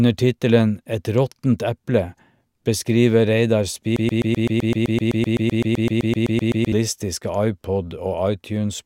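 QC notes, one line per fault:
3.96–6.72 s, broken-record loop: the speech freezes into a stutter as one fragment of about 128 ms repeats exactly, back to back, 22 times for nearly three seconds, giving a rapid mechanical chatter at close to eight repeats per second before normal speech resumes. This is likely a stall in the player, encoder or stream, which kept resending the last fragment it held, so the speech that belonged in that span is lost.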